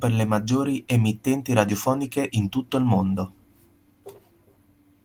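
The speech clip shows no technical faults, and its Opus voice compression, running at 24 kbps in hybrid mode with fullband bandwidth and 20 ms frames, leaves only light coding traces.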